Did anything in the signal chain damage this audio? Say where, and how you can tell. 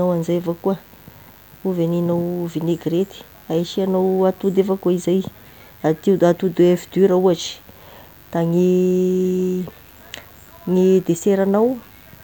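Yes, mains buzz enters in the analogue wiring and runs the whole speech clip, roughly 35 dB below the signal. Switching spikes at twice the 50 Hz mains rate make it a steady, raspy buzz rich in harmonics, not the smooth sine of plain hum.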